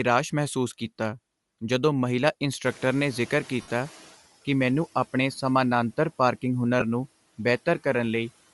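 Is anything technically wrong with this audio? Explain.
Yes. The speech carries codec damage throughout, plus a noise-reduction lag and two dropouts from lost radio frames.

Bluetooth LC3 compression is the likely cause of the plainly audible coding damage across the whole clip. The transform codec discards much of the upper spectrum and fills it with synthetic noise, so speech takes on a breathy, grainy edge. The artefacts fit short 7.5 ms frames at around 48 kbps.

The noise suppressor is catching up from 2.64 to 4.16 s, ending just before "ਕਿ ਮੈਨੂੰ ਆਪਣੇ ਸਮਾਨਾਂਤਰ". Room noise jumps by about 17 dB near 2.5 s, and the suppressor's noise estimate trails behind. The noise first passes through with less reduction, then sinks by about 10 dB over 1.52 s.

Lost LE Audio frames occur from 3.61 to 3.71 s, where about 82.5 ms drops out in scattered gaps over 90 ms, the longest run about 70 ms. The decoder repeats the last spectrum with randomised phase and fades it, so the sound smears into noise and dips. 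A second, brief loss of 15 ms at 6.80 s follows "ਮੈਨੂੰ ਆਪਣੇ ਸਮਾਨਾਂਤਰ ਪਾਰਕਿੰਗ" and is heard as a short noisy blur.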